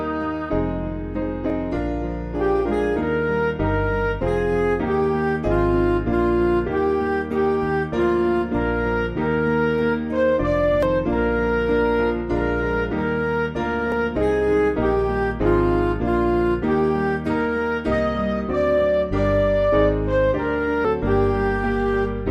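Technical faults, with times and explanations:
1.5 s and 13.92 s, dropped buffer (overrun): an abrupt jump in the sound, with roughly 20 ms and then roughly 10 ms missing. The likely cause is samples not being collected before the hardware overwrote them, so the surrounding audio is butted together without silence.
10.83 s and 20.85 s, damaged data in a compressed stream: a brief blip at each point. Corrupted bytes in the encoded stream left the decoder unable to read those frames, so it lost sync and resumed at the next valid frame header.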